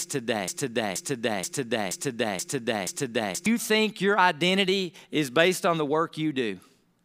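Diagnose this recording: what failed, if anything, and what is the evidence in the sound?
A broken-record loop runs from 0.00 s, already under way, to 3.46 s: one 0.48 s fragment of speech repeats exactly six times before "think your identity is". A stalled playback or stream buffer likely kept resending its last fragment, losing the intervening speech.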